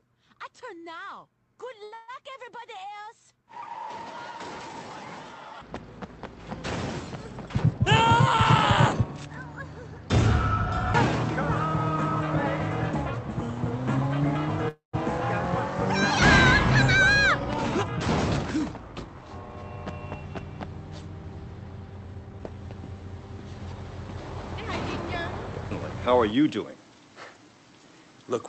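Right at 1.83 s there's a short stall from a late packet. The jitter buffer ran dry, so the receiver held the last bit of sound for about 85 ms until the packet showed up, then carried on from the same spot. Nothing is lost. You just hear a sound hang a touch too long with a faint buzzy smear. It runs straight into a call audio freeze from 1.94 to 2.10 s. That one is 141 ms of stretched, fading fill with no actual silence, so the two together feel like one longer hiccup.

From 7.47 to 9.34 s there's a jitter buffer speed-up. The buffer had built up more audio than it wanted, so the receiver trimmed out tiny pitch-period slices over and over, about a tenth of a second in total. That makes this stretch run at 105% speed with the pitch unchanged, just enough to sound hurried.

At 14.68 to 14.95 s comes a second call audio freeze, likely packets held up in transit. It's 249 ms of fill, and about 140 ms of that decays into silence before the sound picks up where it left off.

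Two more speed-ups follow. From 17.37 to 20.00 s the sound runs at 109%, with roughly 0.2 s trimmed, and it sounds noticeably hurried. At 22.25 to 22.54 s there's a brief burst at 117%, dropping around 50 ms. The whole thing comes through an Opus call path whose top end stops at 8 kHz.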